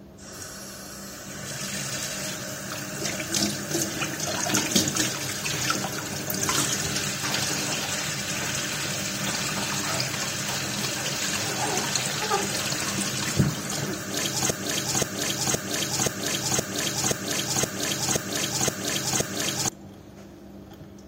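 From 14.5 s to 19.7 s a broken-record loop repeats one 0.52 s fragment ten times back to back, likely from a stalled stream, showing identical repeating spectrogram blocks while the intended audio is lost.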